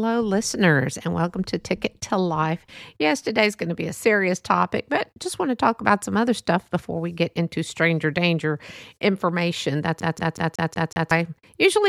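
Right after "into stranger danger information", from 10.0 to 11.1 s, the CD gets stuck on one turn: the laser jumps back to the same spot each rotation, so a 185 ms fragment repeats six times with a brief mute at every jump, giving an even, rapid stutter.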